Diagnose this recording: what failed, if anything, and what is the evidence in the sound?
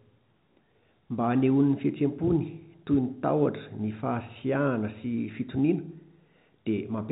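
Nothing here has failed: the speech comes through the G.711 telephone path as intended, with the top end stopping around 4 kHz and only the faint, level-following grain that 8-bit logarithmic coding leaves underneath.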